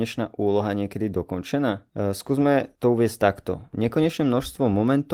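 Speech with no technical faults; the Opus voice compression keeps full bandwidth in hybrid mode, and its light coding texture fits a rate of around 20 kbps.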